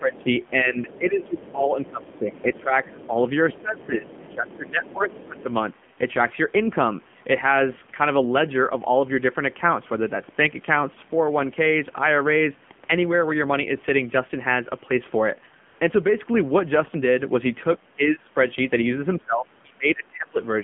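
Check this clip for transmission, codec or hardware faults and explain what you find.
Three faults are audible: narrowband mobile coding throughout, a faint second voice near the start, and one brief comfort-noise patch.

The AMR narrowband mobile codec shapes the whole recording. Speech is rebuilt from a coarse vocal-tract model at a low rate, consistent with roughly 7.4 kbps, so it sounds buzzy and synthetic. The spectrogram shows energy confined to about 150 Hz to 3.4 kHz, with a hard ceiling below 4 kHz.

The other side's voice leaking through appears at 0.16 to 0.5 s, 0.88 to 1.52 s and 2.04 to 3.07 s. It is a faint second voice, roughly 25 dB below the main talker. The likely cause is a loudspeaker echo that the canceller did not fully remove. It shows as weak, overlapping harmonic traces on the spectrogram.

AMR comfort noise fills 15.68 to 15.80 s, a 120 ms gap where no speech frames arrived. 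The real background gives way to smooth, steady synthetic hiss. On the waveform this is a flat, even-level stretch, and the spectrogram shows a uniform, featureless band.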